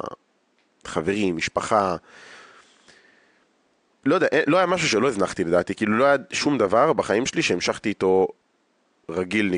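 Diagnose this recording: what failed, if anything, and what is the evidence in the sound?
Nothing failed in this recording.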